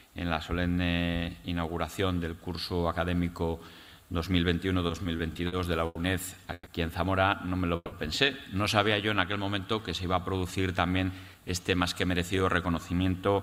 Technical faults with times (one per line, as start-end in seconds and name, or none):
4.87-5.97 repeated stalls (stutter)
6.53-6.68 call audio freeze
7.76-7.94 call audio freeze
10.97-13.35 jitter buffer speed-up